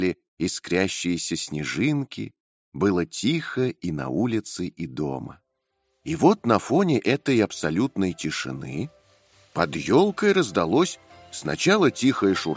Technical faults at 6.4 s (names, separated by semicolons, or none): none